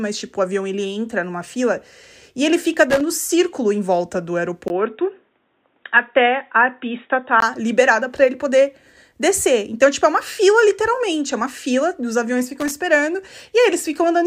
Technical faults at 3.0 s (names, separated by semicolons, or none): loose connector crackle